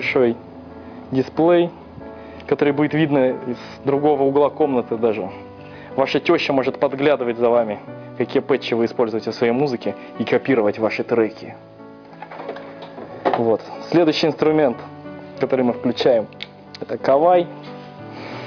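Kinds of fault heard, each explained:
No technical fault of any kind can be heard in this audio. There is nothing to list or explain.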